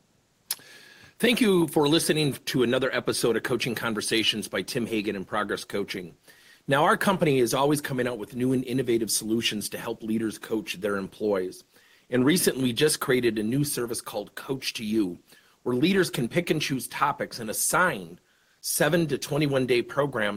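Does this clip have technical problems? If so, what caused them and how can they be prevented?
No, the signal shows no technical faults anywhere in the recording, so there is nothing here that needs preventing.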